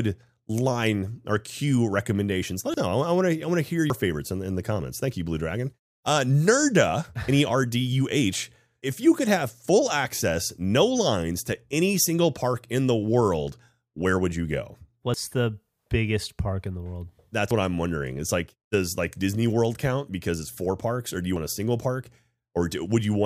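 Speech with five abrupt skips, at 2.74 s (after "or cue recommendations let"), 3.90, 15.14, 17.51 (before "what I'm wondering") and 21.36 s (between "parks or do you" and "a single"). Each is a jump with the sound skipping forward, no gap, losing about 50 to 150 ms, most likely dropped buffers from an overrun.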